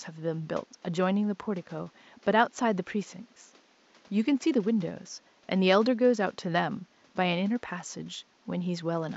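No technical faults are audible.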